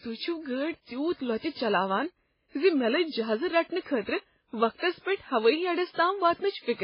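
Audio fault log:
Throughout: transcoding between lossy codecs. The speech has nothing above about 5.3 kHz, so it sounds dull, with two different kinds of codec grit layered on top of each other. The likely cause is a chain of encodes: one pass fits a very low-rate MP3, and a later pass fits a WMA-style encode at roughly double that rate. The second codec spent its bits re-encoding the first one's artefacts and added its own, while the lowest cut-off in the chain stayed.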